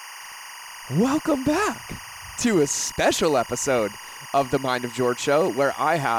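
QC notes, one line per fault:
Throughout, timecode bleed: linear timecode from a neighbouring track or cable is leaking into the audio path, so its square-wave code sits under the speech at about 15 dB below it. Because the code flips between two pitches near 1 kHz and 2 kHz as it encodes each bit, and its pattern repeats at 24 frames per second, it comes across as a steady, busy chirping warble running behind the speech for the whole clip.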